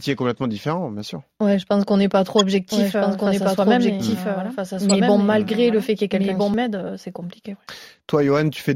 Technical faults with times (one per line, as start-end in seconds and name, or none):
0.37 corrupt frame decoded
2.39-2.43 corrupt frame decoded
2.72-6.54 doubled audio track
4.89 corrupt frame decoded